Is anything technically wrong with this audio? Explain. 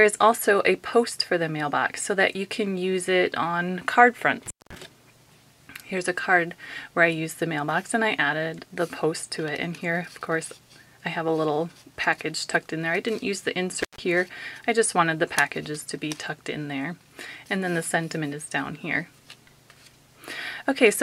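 Yes. There is an intermittent contact fault, heard twice. The first runs from 4.46 to 4.75 s, with the signal gone for about 200 ms. The second runs from 13.81 to 13.99 s, with a gap of about 150 ms. A loose plug or cable briefly loses its connection. The sound drops out, and only faint hiss remains. Crackle marks each edge as the contact breaks and then returns.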